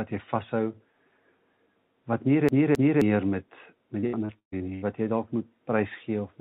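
From 2.49 to 3.02 s, a CD stuck on one turn replays a 264 ms slice twice. The waveform shows identical repeated blocks separated by brief silent dropouts. From 4.00 to 4.84 s, repeated packet loss leaves six gaps, the longest 134 ms, with roughly 43% of the stretch patched. It sounds choppy, and the spectrogram shows smeared, frozen-looking bands. Above 4 kHz the spectrogram stays empty throughout, which fits a G.711 call codec.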